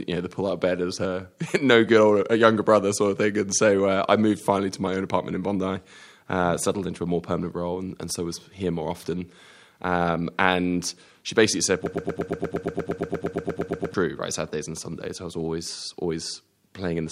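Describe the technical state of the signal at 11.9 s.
At 11.9 s you're right at the start of a broken-record loop that runs from 11.86 to 13.94 s. A tiny slice of the speech, about 0.12 s long, plays back to back 18 times, so you get a rapid stutter instead of the next stretch of talk. That pattern is most likely a player or stream stalling and resending the last fragment it held. Whatever should have been heard across those two seconds is simply gone.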